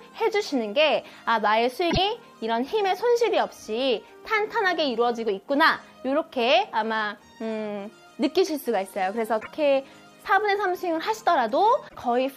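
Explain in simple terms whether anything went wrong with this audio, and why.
Three short bursts of damaged data in a compressed stream break up the sound, at 1.87 to 1.98 s, 9.37 to 9.48 s and 11.85 to 11.96 s, each about a tenth of a second. Corrupted bytes throw the decoder off until it finds its place again.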